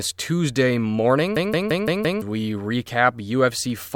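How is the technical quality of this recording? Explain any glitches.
The recording has one clear glitch in the middle of the speech. A system hang loop runs from 1.37 to 2.22 s. The computer or audio driver stalled while the sound hardware kept replaying its ring buffer, so a single 0.17 s slice of audio repeats exactly five times, which fits an 8192-sample buffer. At about 5.9 repeats per second it sounds like a machine-gun stutter, and roughly a second of the actual speech is lost beneath it.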